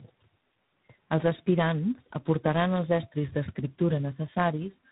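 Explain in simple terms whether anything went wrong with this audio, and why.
Something did go wrong, and it runs through the whole clip: tandem speech coding. The call sounds like it passed through about three different speech coders one after another, each one decoding and then re-squeezing audio the previous one had already roughened. Those losses stack, so the speech ends up rougher and warbly, and it's muffled too, with nothing above about 3.8 kHz, which is why it lacks crispness.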